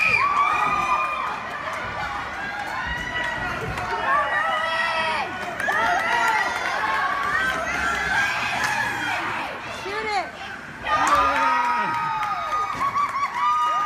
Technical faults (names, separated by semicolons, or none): none